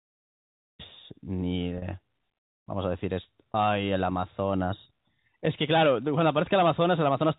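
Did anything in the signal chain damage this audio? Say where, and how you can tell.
Yes, at the network stage: packet loss with pitch repetition, at 1.78–1.82 s and 3.52–3.54 s. Each gap sounds like a briefly held, buzzy sustain rather than a dropout, because the receiver looped the last pitch period over roughly 40 ms and 20 ms of missing audio, consistent with two packets and one packet lost, across the 4 kHz-limited G.711 telephone path.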